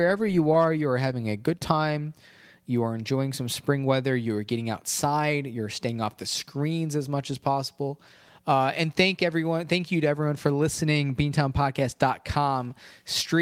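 No technical faults can be heard in this speech recording. There is no point in the audio where a technical problem becomes audible.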